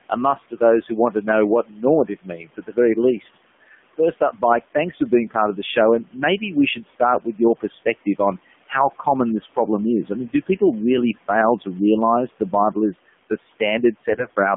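Throughout, the AMR narrowband mobile codec at 7.4 kbps confines the sound to 200 Hz to 3.5 kHz. At this low rate the speech turns buzzy and synthetic.

Speech is cut by the noise suppressor at 0.51 to 1.26 s, after "a must", and again at 1.63 to 3.34 s, 3.73 to 4.43 s (before "thanks for being") and 6.75 to 7.64 s. Each time, parts of the speech drop by about 10 to 18 dB and sound swallowed. The room noise sits about 21 dB below the speech.

From 14.10 to 14.35 s, AMR bit errors, roughly 5 percent, scramble the frame data. The voice turns hoarse and gargly, which fits about a dozen damaged frames.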